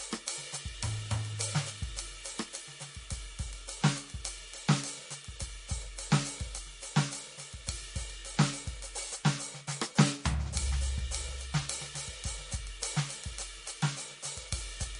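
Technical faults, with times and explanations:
Throughout, MP3 compression: treble stops above 10.6 kHz and the music sounds plainly watery, likely from a bit-starved encode fitting about 40 kbps.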